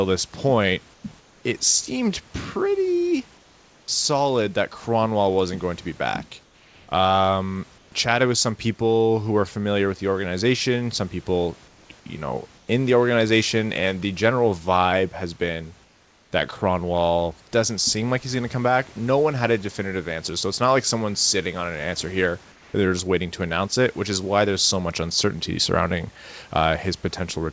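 Speech, in which the sender likely paused transmission whenever no speech was detected, leaving the receiver to synthesise comfort noise in place of the background. At 0.94, 1.20, 3.38, 6.44, 7.78, 12.58, 15.84 and 22.52 s, for 0.1 to 0.5 s each, the room's detailed background gives way to a flat, featureless hiss about 2 to 4 dB quieter. The call path stops above 8 kHz throughout.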